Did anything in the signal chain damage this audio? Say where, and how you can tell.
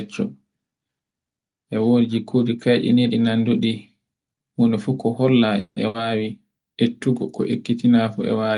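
Yes. At the network and jitter buffer stage, a call audio freeze at 5.59–5.79 s, just after "huno fu ko holla", was likely caused by delayed packets. The last sound stretches into a fading buzz or hiss, then brief silence. It resumes without loss, about 170 ms later.

A burst of packet loss, also on the network path, hits at 5.88–5.97 s, after "fu ko holla e". The last sound is held and faded, then the audio jumps ahead, skipping about 60 ms.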